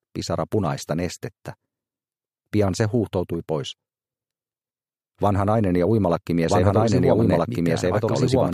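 From 6.49 s to the end, a second copy of the sound comes in abruptly, about a second and a half behind the first and at roughly the same loudness, with no decay or room colour. This is a doubled audio track, likely caused by a slower capture path or an edit holding two copies out of step.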